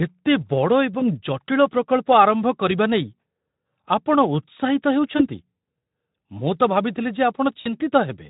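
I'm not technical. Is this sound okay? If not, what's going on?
No. VoIP packet loss concealed by the speech codec occurs at 1.00–1.08 s, 5.17–5.22 s and 7.61–7.70 s. Small chunks of the call (20, 20 and 40 milliseconds) never arrived, so the Speex decoder guessed by stretching and fading the last sound. That creates brief buzzy or noisy, smeared blips that linger after the audio resumes.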